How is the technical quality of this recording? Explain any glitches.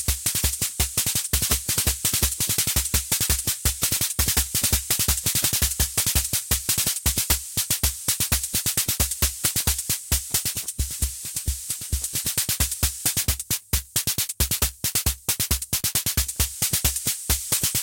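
The recording has one real problem, and it runs the whole way through: integer overflow. The signal's driven about 6 dB past the integer ceiling, so the loudest peaks, only a tiny fraction of samples, wrap to the opposite extreme instead of being limited. You hear sharp, violent cracks on loud moments, much harsher than ordinary clipping.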